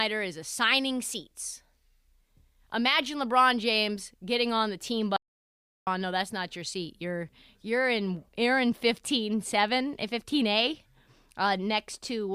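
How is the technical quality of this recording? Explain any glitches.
There's one real glitch in this speech recording: a clean audio dropout to silence from about 5.17 s to 5.87 s, right after "getting on the team" and before "no that's not your". For roughly 0.7 s the sound drops to silence, with no room tone at all, then picks back up mid-flow. That's most likely the input going away briefly, through a loose connection, a link hiccup or a stray mute, while the recorder kept writing silence. Whatever was said in that gap is simply gone.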